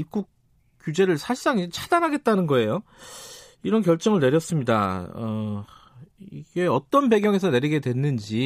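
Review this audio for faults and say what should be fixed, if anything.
A single loud pop sits on top of the speech from 7.24 to 7.26 s, a few decibels above it, while the speech carries on underneath. It is likely a sudden voltage step or pulse from a plug, switch, static discharge or driver glitch entering the signal chain. Secure connectors, avoid switching during recording, and ground equipment to prevent it.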